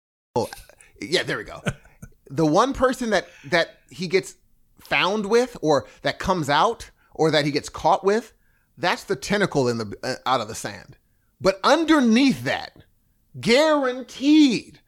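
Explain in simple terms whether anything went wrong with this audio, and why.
The audio opens with a short stretch of dead silence, then at 0.36 s the speech snaps in abruptly, already partway through a sound with no natural build-up. This is a cut-off start: the recording began a moment too late and missed the beginning.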